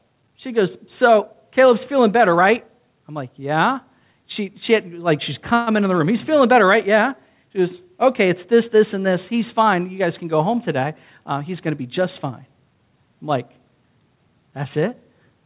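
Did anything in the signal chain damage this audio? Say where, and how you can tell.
Yes, the damage comes from the call's network and jitter buffer stages. The band-limited sound, with nothing above 4 kHz, points to a G.711 A-law call codec at 64 kbps.

A call audio freeze runs from 5.54 to 5.70 s, just before "in the room". For about 128 ms the receiver had no fresh packets, likely because of a network delay, and it stretched the last sound into a fading buzz or hiss. On a spectrogram this shows as smeared, horizontally streaked harmonics. The waveform has a decaying, repetitive stretch rather than silence. No speech is lost, but everything after it arrives 128 ms later.

A jitter buffer speed-up runs from 10.78 to 12.83 s, between "guys can go home" and "I'm like". The buffer had built up too much delay. To drain it, the receiver cut out many pitch-period-sized slices, roughly 150 ms in total, so the speech plays about 106% fast at unchanged pitch and sounds hurried. 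On a spectrogram the formant and harmonic spacing stay put while syllables compress in time. The waveform shows tiny splice points between periods.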